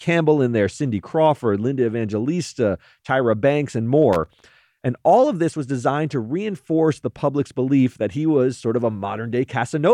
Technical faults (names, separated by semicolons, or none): loose connector crackle